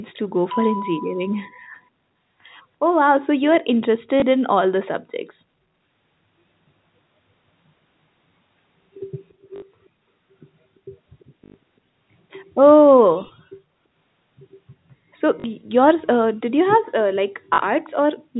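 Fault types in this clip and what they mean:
Packet loss with last packet repeated: When audio went missing, the receiver kept replaying the last chunk it had until fresh audio arrived. The repeated chunks give a short robotic stutter. The gaps are at 4.2 s (20 ms), 9.56–9.62 s (60 ms), 11.44–11.54 s (100 ms), 15.4–15.44 s and 17.54–17.58 s (40 ms each). The lengths fit 20 ms packets, so the longer runs buzz at about 50 Hz.
Echo leak: You can hear faint scraps of a delayed copy of the speech trailing the original by about 340 ms. They come at 9.29–9.33 s, 11.2–11.25 s and 17.84–17.9 s, and they're very quiet, sitting well under the speech. The last one is noticeably stronger than the other two. The likely cause is a loudspeaker on one side whose echo canceller didn't fully scrub what its microphone picked up, so bits got sent back down the call.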